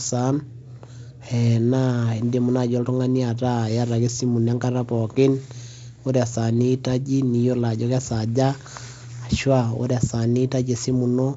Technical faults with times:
none

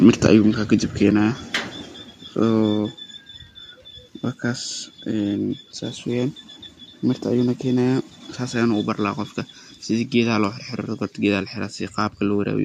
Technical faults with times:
1.11 microphone volume stepped down
2.73 microphone volume stepped down

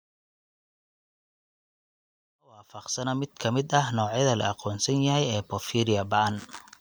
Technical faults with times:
none

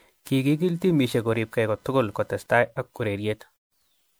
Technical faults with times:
0.00-4.20 generation loss
0.49-2.93 computer activity noise

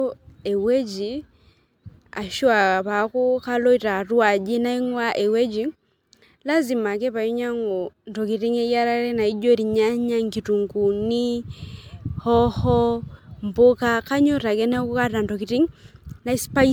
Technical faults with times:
0.00-16.72 generation loss

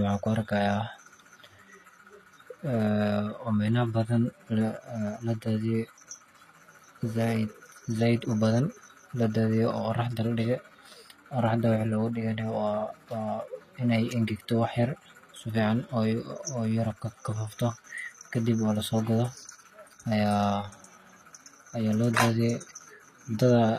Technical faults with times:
0.00-23.78 HE-AAC compression

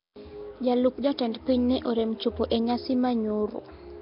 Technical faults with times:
0.00-4.02 Nellymoser compression

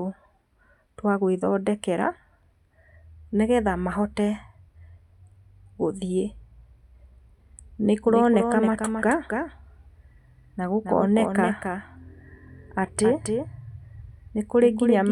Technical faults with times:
8.05-15.12 doubled audio track

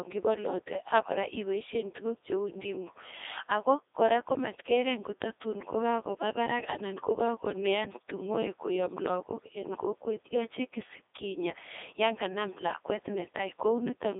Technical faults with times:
0.00-14.19 Codec 2 vocoder

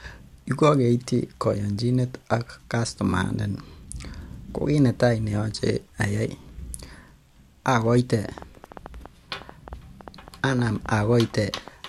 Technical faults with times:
8.38-11.69 train of clicks

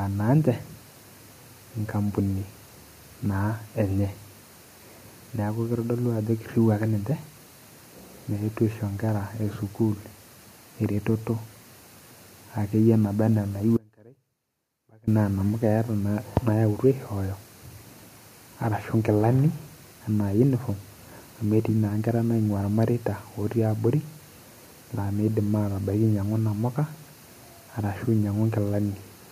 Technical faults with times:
13.77-15.07 audio dropout to a faint residue

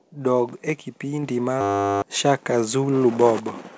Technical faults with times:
1.23 microphone volume stepped up
1.61-2.02 system hang loop

